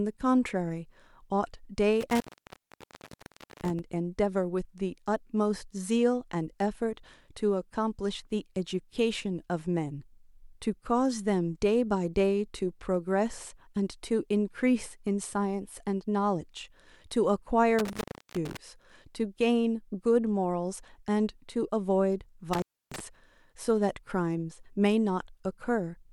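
Speech cuts out with crackle at the edges and faint hiss in the gaps at 2.01–3.79 s, 17.79–18.57 s and 22.53–23.00 s. This is intermittent contact: a loose cable or plug opening for about 1.41 s, 0.34 s and 0.30 s.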